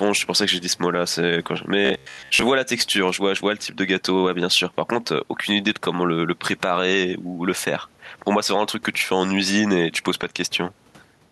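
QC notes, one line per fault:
Throughout: gain pumping. Loud and soft parts sit closer in level, with the gain swinging by roughly 5 dB and leaving the speech squashed. The likely cause is gain set far too high, with a fast limiter pulling it down on every peak.
1.85–2.42 s: robotic sound from repeated short buffers. The speech becomes a rigid, metallic buzz at 66.8 Hz that only loosely tracks the words. This likely comes from audio arriving too seldom, with most of it replaced by repeats of a roughly 15 ms stretch.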